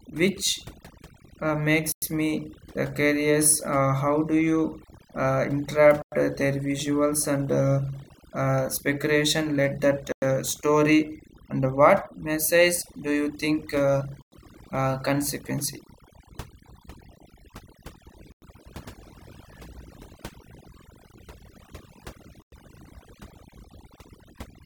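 The speech runs through overdone noise removal for its whole length. Frequency bands near the noise floor are pulled down or cut, taking quiet voice detail with them, so the background drops and breaks up into twinkling specks. There are also six gaps between chunks, each 100 ms of hard-edged silence, at 1.92, 6.02, 10.12, 14.22, 18.32 and 22.42 s. They fall every 4.1 s, which fits audio delivered in 4-second chunks with silence inserted at each join. Nothing is missing on either side, which sets this apart from dropouts, where sound is lost.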